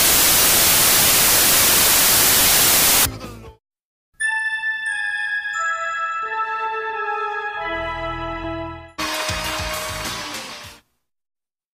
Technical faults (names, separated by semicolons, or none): samples built from the wrong bytes